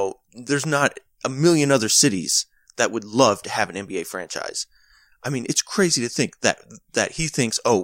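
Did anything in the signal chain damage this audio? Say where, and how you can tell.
No, no damage audible.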